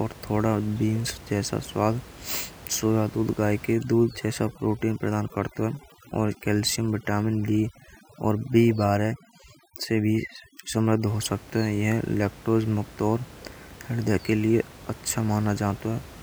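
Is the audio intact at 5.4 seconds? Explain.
No. At 5.4 seconds the speech is inside a stretch of overdone noise removal that runs from 3.74 to 11.07 s, starting after "दूध थोड़ा गाय" and ending before "हो सकते". The suppression was set too hard, so individual frequency bands near the estimated noise floor are pulled down or cut out, taking quieter parts of the voice with them. The room noise, about 21 dB below the speech elsewhere, drops and breaks up into twinkling specks. Unlike a low-bitrate codec, the damage follows the noise estimate rather than a fixed bandwidth limit, so the steady background itself is what breaks up.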